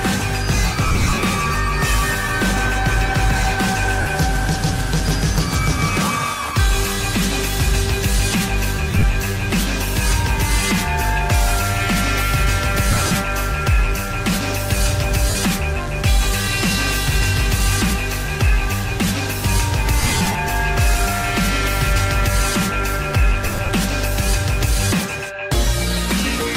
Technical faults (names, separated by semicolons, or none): lost LE Audio frames